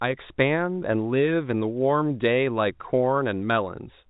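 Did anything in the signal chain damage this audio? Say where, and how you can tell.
No, nothing in the signal chain stood out as damaging this speech on listening.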